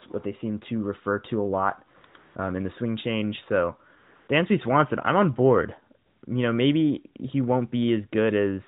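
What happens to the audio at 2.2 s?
AMR comfort noise fills 2.06–2.14 s and 2.18–2.36 s: the phone treated the talker as silent, stopped sending speech frames, and the receiver substituted synthetic noise. Unlike a dropout's dead silence, these gaps carry a smooth, steady hiss that switches abruptly in and out.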